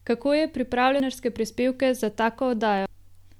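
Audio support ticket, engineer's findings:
Two short blips at 1.0 s and 2.86 s: damaged data in the compressed stream. Decoder chokes on corrupt frames, loses sync, and hunts for the next header.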